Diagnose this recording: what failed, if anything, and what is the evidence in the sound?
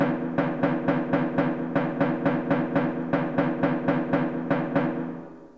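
Nothing here failed: the sound has simply come over a call link, and its top end stops at about 8 kHz, which fits a wideband call codec like G.722 running at 64 kbps, with no dropouts, glitches or other damage to point at.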